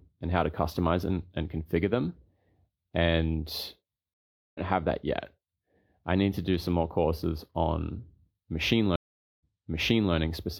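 At 4.14 s the speech hits a stream reconnect: the connection drops, there's about 0.41 s of silence, then a fresh decoder picks up roughly a fifth of a second further on, so a little speech is skipped before "have that". A second one runs from 8.96 to 10.14 s with about 0.44 s of silence, but this time playback resumes 0.74 s earlier, so you hear a short stretch repeated.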